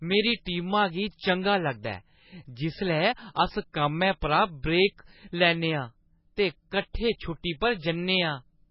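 The whole recording carries heavy MP3 compression artefacts. Nothing is left above 5.5 kHz, so the speech sounds dull. The damage is severe and fits a very low bitrate of about 16 kbps, the likely cause. At that rate the encoder cuts the treble at a fixed point. It also drops weak frequency lines, which then flicker in and out between frames. That gives the voice a watery, swirling texture, and s sounds turn metallic.

At 0.45 s there is a pre-echo. A sharp onset lands late in a codec block. The block's coarse noise fills the quiet moment before it, about 16 ms ahead. A short hiss leads in, and the attack sounds soft and smeared. The same thing happens at 6.93 s, with about 15 ms of hiss ahead of the onset.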